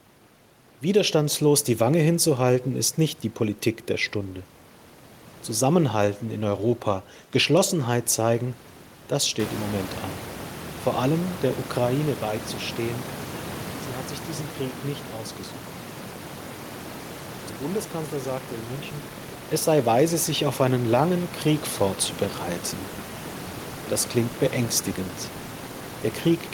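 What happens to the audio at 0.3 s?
Nothing goes wrong at 0.3 s: the speech there is intact, with no dropout, distortion or other fault.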